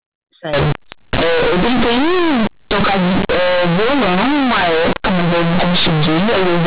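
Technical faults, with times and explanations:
0.53 to 6.67 s, companded audio read as linear: From 0.53 s the speech turns very loud and harshly buzzy, and the pauses fill with strong noise. The sound fits mu-law telephone bytes being played as plain linear 8-bit samples with no expansion. Every sign change then jumps across about half the output range. Quiet passages come out as large as loud ones, and the waveform is badly bent. Before this, the band-limited G.711 telephone sound with nothing above 4 kHz is clean.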